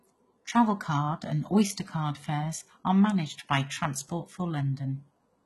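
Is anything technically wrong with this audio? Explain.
Yes. Throughout the speech, the treble sounds synthetic and gritty, and nothing is heard above 11.8 kHz. This is likely HE-AAC compression. The upper band is rebuilt from copied lower bands, so harmonics misalign. S sounds turn metallic and lispy. The heavy damage fits a bitrate near 16 kbps.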